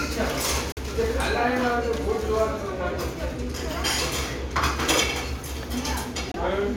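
At 0.72 s the sound cuts to silence for about 65 ms, returning at 0.79 s. A second, shorter gap opens at 6.32 s and closes at 6.35 s. The sound resumes further along each time, as if it had kept playing. This is likely a Bluetooth dropout: packets reached the headphones too late and were discarded. The longer gap fits two lost packets, the shorter one a single packet.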